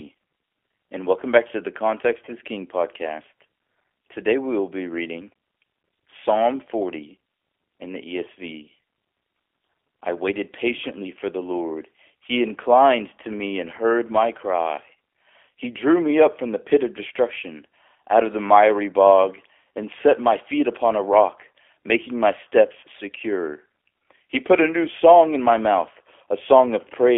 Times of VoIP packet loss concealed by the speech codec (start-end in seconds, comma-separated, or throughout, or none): 2.25-2.33, 22.80-22.83